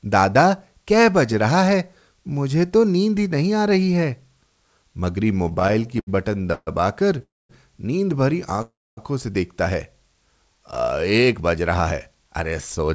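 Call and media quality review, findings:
Repeated stalls (stutter), 5.44–6.69 s: speech drags and hiccups through the whole stretch, around eighteen little holds, longest 136 ms, roughly 30% of that span patched over. Jitter buffer kept running dry on slow or late packets. Receiver extended the last sound each time. Nothing actually lost.

Short stall from a late packet, 7.19 s: one tiny 17 ms hold, a slight smear on the sound. Jitter buffer underran for a moment waiting on one late packet. Playback picked up exactly where it left off.

Call audio freeze, 7.22–7.51 s: right after that stall, the sound hangs, fades, then goes dead for about 220 ms. Likely packets held up in transit, so the jitter buffer emptied and concealment decayed to silence. Resumes in place, adding about 270 ms delay.

Call audio freeze, 8.62–8.99 s: same deal, a bit longer. Held tone fading out, then about 260 ms silence. 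Likely another delivery hold-up draining the jitter buffer. Nothing skipped, just about 350 ms of extra gap.

Jitter buffer speed-up, 11.19–12.90 s: speech runs about 6% fast, same pitch, a little rushed. Buffer had piled up excess audio after the late bursts, so the receiver cut small pitch-period chunks repeatedly, about a tenth of a second in total. Band-limited to 8 kHz throughout, consistent with the wideband call codec on this path.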